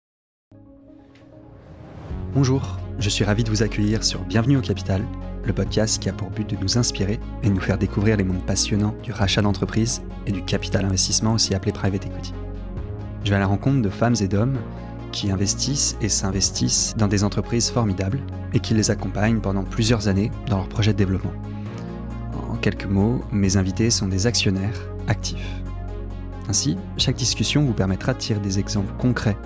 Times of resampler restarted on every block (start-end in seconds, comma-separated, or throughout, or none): 8.20-11.90